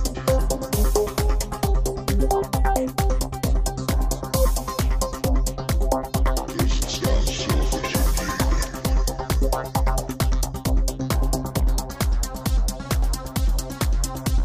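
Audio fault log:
No faults detected in this recording.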